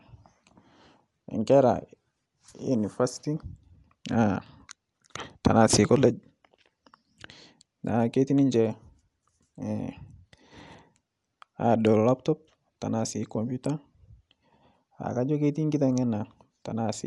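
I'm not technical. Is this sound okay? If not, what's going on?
No. The speech was most likely squeezed by Dolby Digital compression set to save a lot of space, and the damage is plain throughout, from start to finish. To save space, the encoder throws away everything above about 11.5 kHz and fills thinly described parts of the sound with substitute noise. As a result the voice sounds dull and muffled, with a rough, fluttering grain clinging to it.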